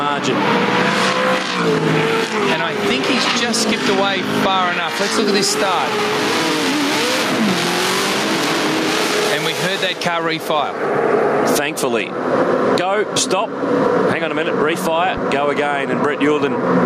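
Gain pumping runs through the whole recording: the level ducks under every loud sound and swells back up in the gaps, swinging by roughly 10 dB, so loud and soft parts sit squashed together. The likely cause is input gain set far too high, with a fast limiter or compressor clamping down.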